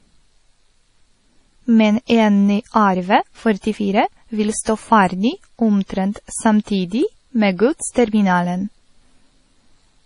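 From start to end, the speech has nothing above 10.5 kHz. Two kinds of swirly, smeared artefacts sit together. This is likely transcoding between lossy codecs. It points to a low-rate MP3 re-encoded as AAC-LC, which kept that cut-off and added its own damage.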